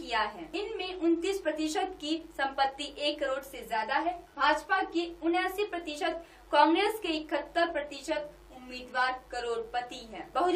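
No fault can be heard anywhere in the recording.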